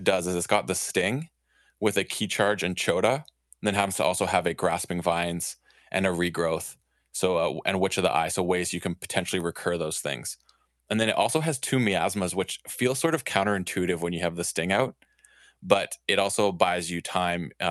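Speech, with no technical faults to be heard anywhere in the recording. It has come through a working call path, and its content tops out at about 12 kHz, which points to an Opus codec set to that bandwidth.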